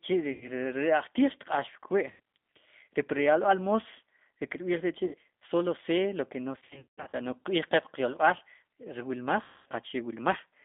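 Throughout, the speech sounds rough and faintly synthetic, confined to roughly 200 Hz to 3.6 kHz: the G.729 codec at 8 kbit/s rebuilding each frame from a filter, pitch predictor and sparse pulses.

Brief stretched sounds that fade and leave the voice weak appear at 0.32–0.49 s, 2.11–2.19 s, and 5.05–5.15 s, the last just before "solo ce lo que". A longer scattered stretch follows at 6.59–7.15 s, right after "ce lo que no", with about 390 ms lost across 540 ms and the longest gap 180 ms. Another comes at 9.42–9.67 s, after "yolb'al ri wilmaj". This is VoIP packet loss concealed by the speech codec: the decoder repeated its last pitch and filter with falling gain until packets resumed.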